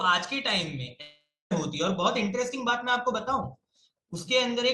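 In this speech clip, at 1.01 s the audio dissolves into a fading buzz, then about 0.26 s of silence, returning at 1.52 s with half a second lost, likely a long network dropout.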